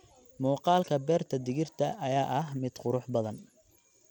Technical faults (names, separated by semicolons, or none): Bluetooth SBC compression